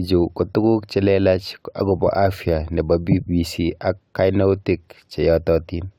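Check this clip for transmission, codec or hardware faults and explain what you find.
No fault can be heard, and the speech signal comes across intact and continuous throughout.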